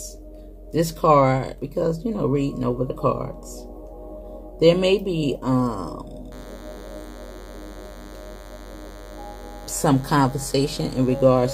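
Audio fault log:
6.31–11.54 s: DECT cordless phone buzz. A thin, steady buzz appears at 6.31 s and runs to the end. It sits well below the main sound, about 25 dB down. Its fundamental is 100 Hz, with a dense stack of harmonics above it. That pattern comes from a nearby DECT handset or base sending a short radio burst every 10 ms. The audio circuit rectifies each burst into a click, and the regular train of clicks fuses into the buzz.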